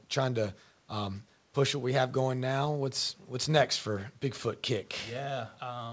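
A speech recording with no technical faults to point to. It has come over a WebRTC call path whose codec, most likely G.722, leaves nothing above 8 kHz, giving the band-limited sound of a wideband call.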